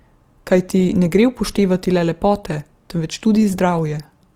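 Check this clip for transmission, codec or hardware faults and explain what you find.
There is one fault, present across the whole speech clip: Opus compression damage that is plainly audible from start to finish. The grain and roughness are likely the result of Opus running in its music (CELT) mode at a low rate, and the sound fits roughly 24 kbps. The encoder keeps each band's overall energy but lacks bits for the fine detail, so it fills bands with noise or copied lower content. Tonal parts of the speech come out rough and grainy rather than swirling. On a spectrogram, harmonics look smeared and speckled with noise while the full bandwidth stays intact. The waveform looks largely normal.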